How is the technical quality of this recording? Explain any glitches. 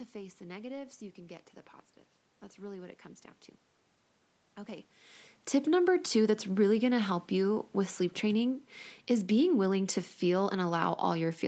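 No technical glitches are audible.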